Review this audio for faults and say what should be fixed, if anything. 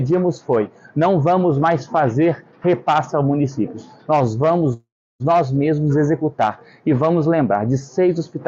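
A call audio freeze runs from 4.73 to 5.22 s: the last sound smears into a fading buzz, then about 340 ms of silence, likely from delayed packets draining the jitter buffer. Unlike a dropout, nothing is lost; the audio resumes where it stopped, now 466 ms late. A larger adaptive jitter buffer or a steadier network path would prevent this.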